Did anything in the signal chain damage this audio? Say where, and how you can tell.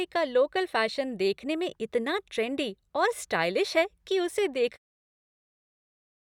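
No, nothing in the signal chain has damaged this speech recording. The only change in level is a smooth fade-out near the end, easing down from around 4.5 s and finishing at 4.79 s with no click or hard edge, just as an editor would shape it.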